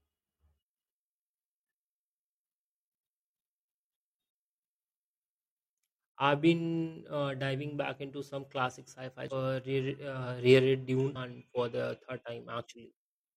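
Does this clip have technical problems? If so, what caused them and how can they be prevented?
Yes. Damaged data in a compressed stream causes brief glitches at 9.28–9.33 s and 11.12–11.17 s (after "uh reread") as the decoder loses frame sync. Checksums with retransmission prevent this.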